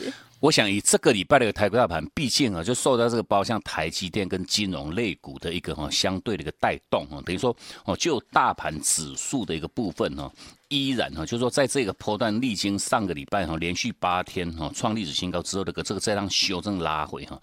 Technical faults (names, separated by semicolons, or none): train of clicks